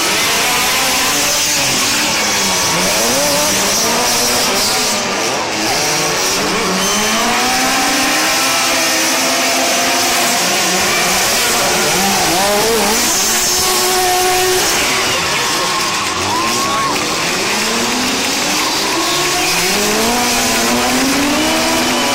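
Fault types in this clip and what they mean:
No technical faults can be heard anywhere in the audio.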